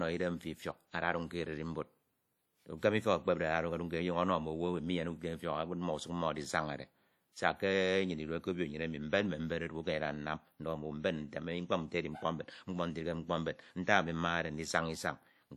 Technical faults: WMA compression

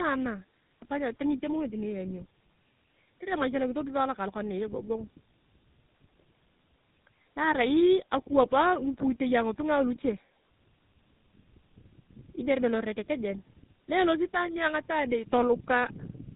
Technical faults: tandem speech coding

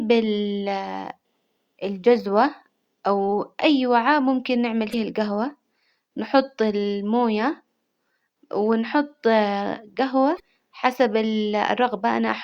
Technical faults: damaged data in a compressed stream

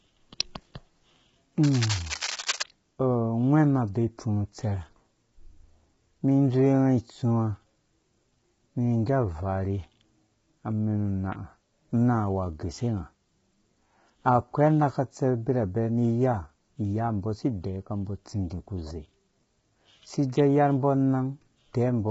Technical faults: low-delay AAC compression; cable scratch noise

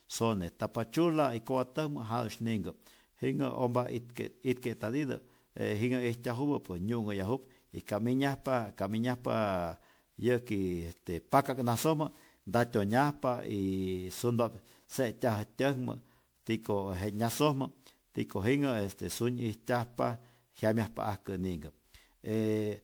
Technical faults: generation loss

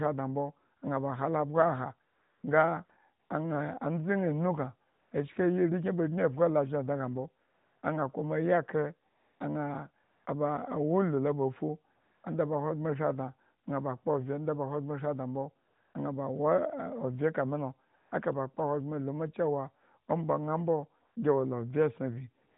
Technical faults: AMR comfort noise

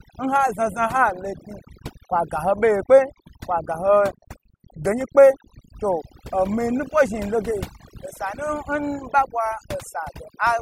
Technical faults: overdone noise removal

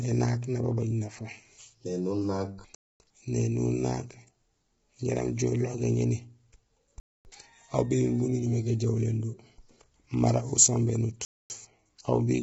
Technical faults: low-delay AAC compression; gap between chunks

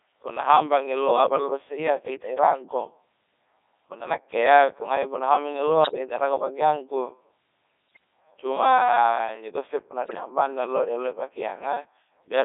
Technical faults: Codec 2 vocoder; bit errors on digital voice radio

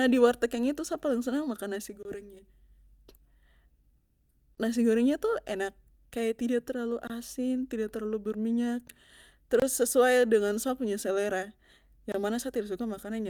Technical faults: gap between chunks

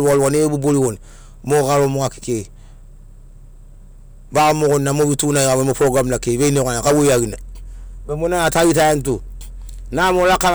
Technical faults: hard clipping

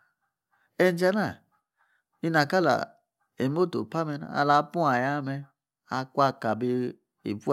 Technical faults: none

